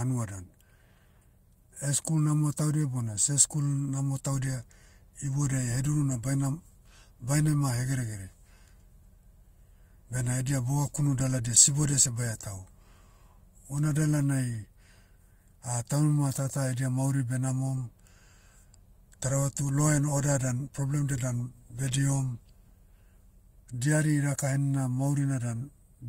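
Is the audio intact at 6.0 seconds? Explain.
Yes, the audio is intact at 6.0 seconds, with no fault present at that moment.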